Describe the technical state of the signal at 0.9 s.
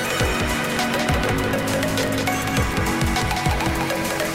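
At 0.9 s, as through the whole clip, every sound has a dry, full-band repeat arriving about a fifth of a second later and roughly 5 dB quieter, with no reverberant tail. This doubled audio track is likely a second capture through a slower path being mixed back in.

A steady 43.1 Hz buzz also sits under the audio, which runs 1.12 times fast at near-normal pitch. This block size mismatch (truncated) happens when one stage writes longer blocks than the next reads. The buzz rate fits a 1024-sample read block, with each block's surplus tail discarded.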